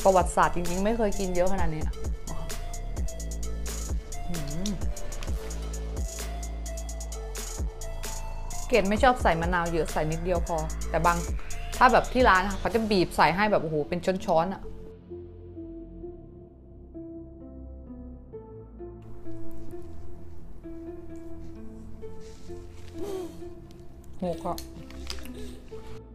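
No technical faults can be heard anywhere in this recording.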